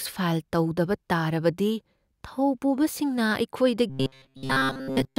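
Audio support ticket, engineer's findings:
Robotic sound from repeated short buffers, 3.90 s to end: stiff 133 Hz buzz, most audio replaced. Likely starved buffer looping roughly 7.5 ms chunks.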